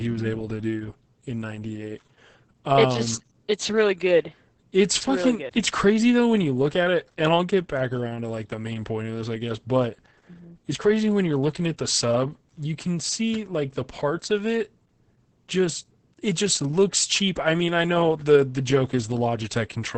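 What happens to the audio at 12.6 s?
At 12.6 s the speech is still passing through the Opus voice compression that runs through the whole clip. The SILK coder, with a heavily coarsened excitation that points to a bitrate around 10 kbps, leaves nothing above 8.7 kHz, so the voice sounds muffled, hoarse and slightly robotic.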